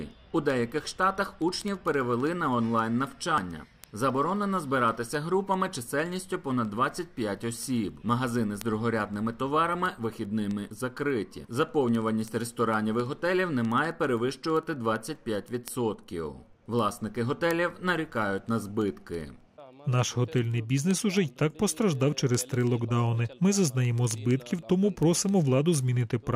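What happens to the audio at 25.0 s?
A receiving clock not locked to the sender, running a few hundred ppm off, slips one sample roughly every 70 ms, causing word clock ticks heard at a steady rate from 0.11 s to 26.33 s.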